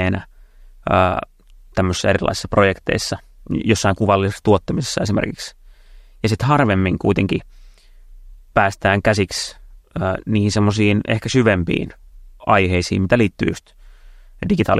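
No technical faults are audible.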